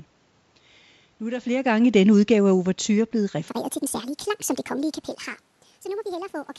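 Speech with automatic gain falling from 1.88 to 3.38 s, where the level sinks by about 4 dB together with the background. From 3.48 s to the end, the section plays at the wrong speed, 1.59 times too fast and roughly seven semitones high, likely from playback against the wrong clock.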